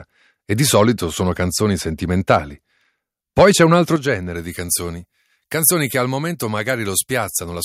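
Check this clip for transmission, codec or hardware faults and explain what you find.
Three kinds of fault are audible in the speech.

Harsh, crackly edges hit the loudest peaks at 0.75–0.82 s (after "e di"), 2.3–2.36 s (just after "sono canzoni") and 3.38–3.63 s (before "un altro"). This is microphone overload, likely from input set so high that tops were flattened, about 1 to 4 dB over.

At 3.96 s voice and background suddenly drop by about 8 dB. This is the microphone volume stepped down, likely call software cutting input gain after clipping.

From 4.35 s to the end the sound turns thin, bright and sibilant. Pre-emphasis was left on, a 75 µs FM-style treble lift of about 13 dB at 10 kHz, never undone.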